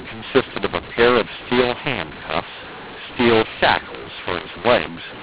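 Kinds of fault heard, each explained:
mu-law and A-law mixed up: The speech was coded as G.711 mu-law but decoded as A-law throughout, so sample levels are remapped wrongly, some too large, others too small. The speech sounds harsh and distorted, and quiet stretches fill with noise.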